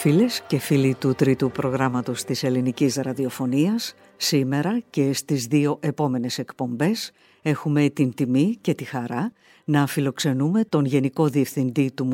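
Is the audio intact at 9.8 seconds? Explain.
Yes, the audio is intact at 9.8 seconds, with no fault audible at that moment.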